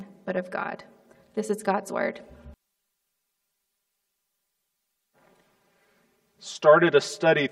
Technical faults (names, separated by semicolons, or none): channel delay (comb filtering)